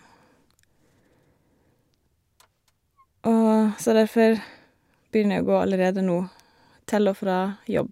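A short bit of recorded speech, and there's nothing technically wrong with it that I can hear anywhere along the way.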